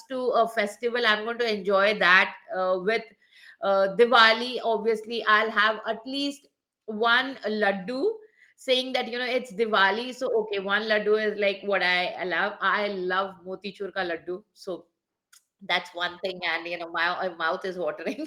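No faults turn up anywhere in the recording; there is nothing to log.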